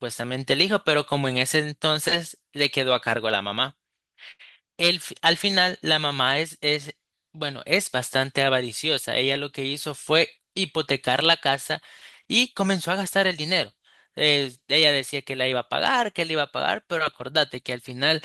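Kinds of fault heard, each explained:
Short stall from a late packet: at about 4.31 to 4.41 s a packet arrived too late, the jitter buffer emptied, and the receiver held the last sound for about 78 ms before resuming exactly where it stopped, so nothing is lost but the delay grows by that amount. The sound hangs briefly with a faint buzz or dip. On a spectrogram the harmonics run flat and unchanged for that span. In the waveform the last cycles repeat almost identically.
Jitter buffer speed-up: from about 10.38 to 11.09 s the buffer held more audio than its target, so the receiver trimmed it back by cutting out short pitch-period-sized pieces one after another, removing roughly 40 ms in total. The speech plays at about 105% speed with its pitch unchanged and sounds slightly rushed. On a spectrogram the harmonic spacing stays the same while syllables sit closer together. The waveform shows tiny seams where cycles were dropped.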